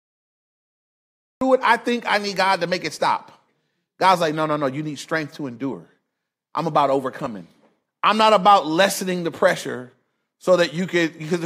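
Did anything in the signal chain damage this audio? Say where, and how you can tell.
Yes: a cut-off start, from recording beginning late. Digital silence runs to 1.41 s, then speech enters mid-sound before "it I think I". The waveform jumps from a flat line straight to full level with no attack.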